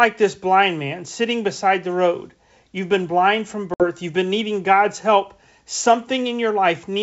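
From 3.74 to 3.85 s, after "been blind from", packet loss on an ADPCM call drops about 60 ms (roughly three packets) to silence. This shows as a flat waveform gap and a blank spectrogram column. The decoder's predictor and step size then mistrack, so "you've been needing" re-enters slightly distorted before settling.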